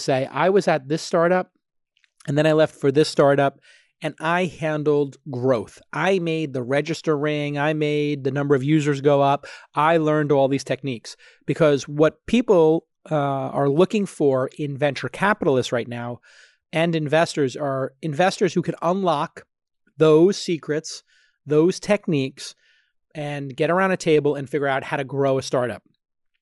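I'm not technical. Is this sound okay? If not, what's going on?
Yes, no faults are audible.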